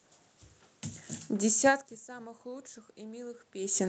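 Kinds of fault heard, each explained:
Automatic gain rising: after the input falls by about 22 dB near 1.3 s, the gain control gradually raises its gain through to the end, so voice and room noise swell together, whereas a talker moving closer would lift only the voice.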